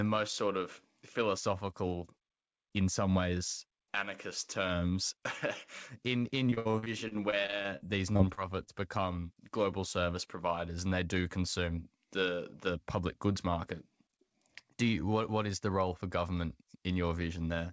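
From 6.50 to 8.69 s there is repeated packet loss with a robotic sound. About twenty brief holes open in quick succession, the longest about 65 ms. Each is papered over by stretching the sound just before it, so roughly a fifth of that stretch is synthetic fill. Unlike a single dropout, which leaves one isolated glitch, the fills pile up into a choppy, robotic sound with pieces missing. Through the call path, which carries nothing above 8 kHz as a wideband codec like G.722 would, the fills sound dull as well as robotic.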